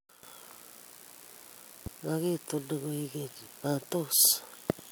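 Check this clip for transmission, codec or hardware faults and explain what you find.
One fault stands out: a loud pop from about 1.86 to 1.89 s. A single sharp pop cuts across the speech, which continues underneath uninterrupted, and peaks a few decibels above the surrounding level. Its likely cause is a sudden electrical step or pulse, such as a connector, switch or static discharge, entering the signal path, where later circuits shaped it into a brief transient. On a waveform it appears as a narrow spike; on a spectrogram, a thin vertical broadband stripe.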